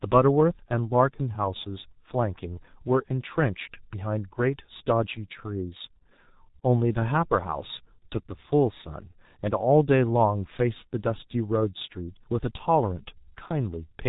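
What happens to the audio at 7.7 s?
The speech at 7.7 s carries heavy G.723.1 codec damage, present across the whole clip rather than starting there. Each 30 ms frame is squeezed into a coarse voice model that updates slowly, at a rate that points to roughly 6 kbit/s, and nothing passes above 3.8 kHz. The result is muffled, hoarse speech with smeared consonants. A plain low-pass filter would dull the top end but leave consonant edges clean, without this rasp.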